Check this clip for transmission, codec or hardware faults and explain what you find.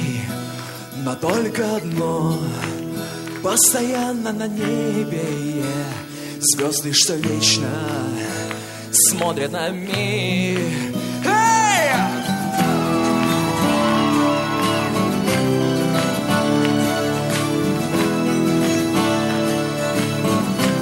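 Nothing turned up here, so there's nothing to flag from the transmission or hardware side.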